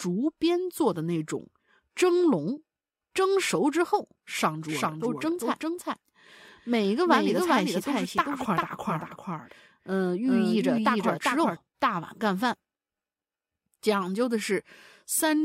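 Speech in which, from 4.68 s to 11.56 s, a doubled audio track appears: a full-band copy trails around 400 ms behind, roughly 5 dB quieter, with no room decay, switching on and off abruptly. This is likely a second, slower capture path mixed in.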